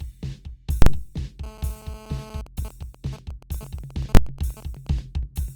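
Invalid numbers at full scale strike at 0.82 s and again at 4.15 s. A calculation produced invalid values that were forced to the maximum level for a whole block. The first lasts about 43 ms, which fits a 2048-sample block: a loud pop, silence, then another pop. The second, about 21 ms, fits a 1024-sample block and is heard as one bang.

GSM phone buzz runs from 1.44 to 2.41 s. A 2G phone on a call was transmitting nearby, and the audio circuitry rectified its radio pulses, which repeat about 217 times a second. This gives a steady, harsh, raspy 217 Hz buzz full of harmonics, about 13 dB below the music and unrelated to it.

GSM signalling bursts follow from 2.47 to 4.99 s. The phone was still on a call, but its user had gone silent, so it sent only short groups of bursts. Rectified in the same way, these become even ticks with a longer 217 Hz buzz twice a second, roughly 10 dB below the music.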